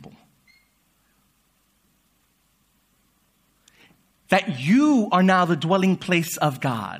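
Nothing stood out as a technical fault on listening to this speech recording.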